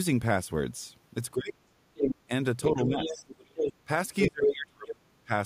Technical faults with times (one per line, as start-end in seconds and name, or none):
1.34-1.74 speech suppressed in double talk
1.95-2.15 other side's voice leaking through
2.27-2.31 speech suppressed in double talk
2.60-3.73 other side's voice leaking through
2.73-3.28 speech suppressed in double talk
4.19-4.52 other side's voice leaking through
4.27-5.31 speech suppressed in double talk
4.87-4.93 other side's voice leaking through